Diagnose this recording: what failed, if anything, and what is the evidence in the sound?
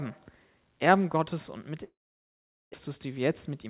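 At 1.84 s the speech turns into a short fading buzz, then silence until 2.76 s, and about 0.6 s of speech is lost. A long network dropout is the likely cause: packets stopped arriving, concealment smeared the last sound, and playback resumed with its delay shifted by roughly 0.3 s.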